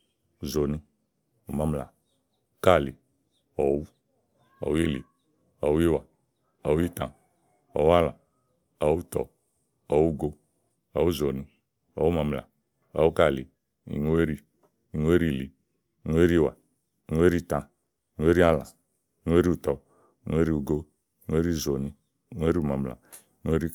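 No technical faults can be heard anywhere in the speech recording; the signal stays steady and intact throughout, with nothing breaking up, dropping out or distorting at any point.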